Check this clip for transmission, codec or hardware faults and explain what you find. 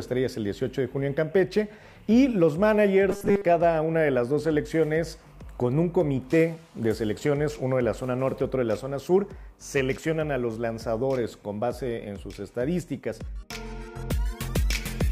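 One fault is present: robotic sound from repeated short buffers, from 3.10 to 3.45 s. Through most of that stretch the sound locks into a rigid, metallic buzz at 200 Hz that still follows the rough contour of the audio. The likely cause is new audio arriving too seldom, so playback fills the gaps by looping the last chunk, about 5 ms long, while real audio is skipped. Repeating a 5 ms chunk forces that fixed 200 Hz pitch.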